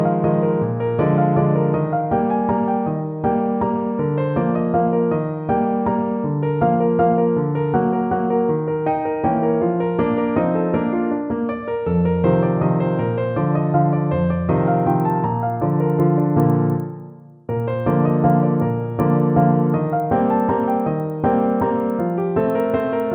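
Resampler restarted on every block from 14.7 s to the end: each 100 ms block is converted in isolation, likely from 24 kHz to 48 kHz, leaving edge errors that tick at 10 Hz.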